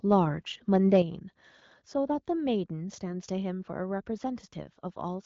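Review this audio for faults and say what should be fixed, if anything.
Microphone overload from 0.73 to 1.0 s: the loudest peaks exceed the converter's limit by about 3 dB, and a small fraction of samples are flattened, adding harsh crackle, likely from excessive input gain. Lowering the microphone input level leaves headroom above speech peaks.

Microphone volume stepped down at 1.02 s: the speech and background drop together by about 6 dB in one step right after the distorted peak, likely automatic gain reduction by the call software. Setting a correct fixed input level prevents the software from having to correct it mid-call.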